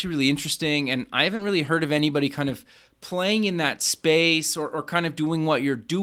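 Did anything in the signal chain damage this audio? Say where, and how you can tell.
Yes. Short concealed packet loss at 1.35 to 1.41 s, a network-stage fault: about 40 ms of the call arrived too late or not at all. The decoder extended the preceding sound across the hole and blended back, leaving a brief smear where a short consonant can drop out.

Lost packets rebuilt from error correction, also at the network stage, at 1.39, 1.65, 1.85 and 1.97 s, each 20 ms. Every lost packet was replaced by the low-bitrate Opus copy carried in the next one, so nothing goes silent, but those frames sound rougher and noisier.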